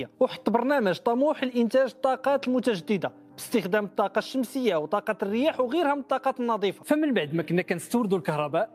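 Nothing goes wrong anywhere in the audio, so there isn't a single technical fault to point to.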